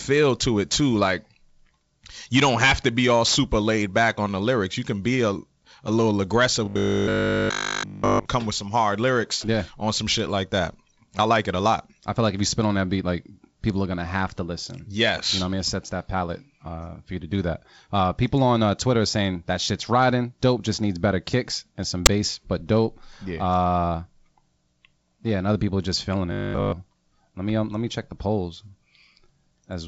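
From 6.66 to 8.26 s the speech turns into a rigid, metallic drone. This is robotic sound from repeated short buffers. A steady buzz at 50 Hz sits on top of the speech, and the sound still roughly follows the speech underneath. The likely cause is new audio arriving too seldom, so the software replays the last 20 ms over and over. Nearly all of the real audio in that stretch is skipped.

At 22.06 s there is a single loud bang. This is invalid numbers at full scale. A calculation produced values with no real meaning, and the output jumped to maximum level. The block is only about 10.7 ms long, which fits a 512-sample block. That is too short to hear separate clicks at its start and end, so it lands as one sharp hit.

From 26.32 to 26.72 s the same robotic sound returns. It is briefer, with the identical 50 Hz buzz. Nearly all of the audio is again replaced by repeats of one short buffer. 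Through the G.722 wideband telephone coding, nothing is heard above about 7.8 kHz.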